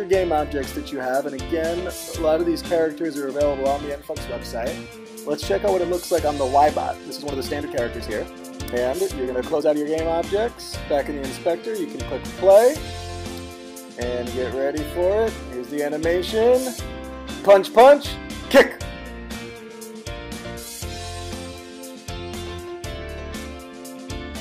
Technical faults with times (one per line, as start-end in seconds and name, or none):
6.94-9.84 time-stretched section